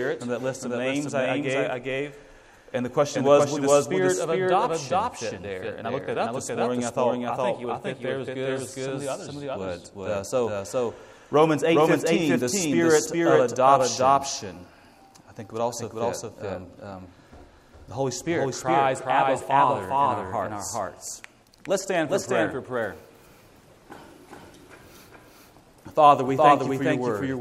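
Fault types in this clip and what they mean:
Doubled audio track: A second copy of the sound runs through the whole clip. It trails by roughly 400 ms at about equal loudness. It has no decay or room colour. A slower second capture path is the likely cause.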